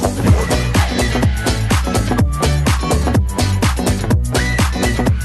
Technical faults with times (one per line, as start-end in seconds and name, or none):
none